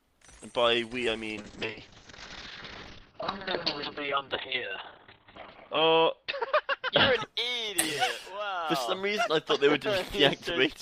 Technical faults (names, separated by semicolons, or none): call bitrate drop